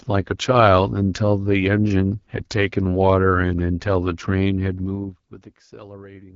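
Throughout the speech the AMR wideband (HD Voice) codec is plainly audible. Voiced sounds turn rough and raspy, and nothing sits above 7.6 kHz. That coarse buzz, rather than simple dullness, points to a low AMR-WB rate near 8.85 kbit/s.

From 4.69 to 5.46 s the level falls by roughly 20 dB in 2 dB steps, about ten per second, producing zipper noise. Each unsmoothed step leaves a small click, so a ticking rides on the speech during the drop. A clean fader move would glide silently.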